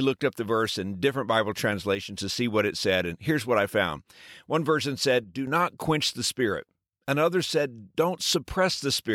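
At 1.95–2.18 s and 5.24–5.47 s the speech abruptly falls about 6 dB, showing as squared-off dips on the waveform, likely because one channel drops out.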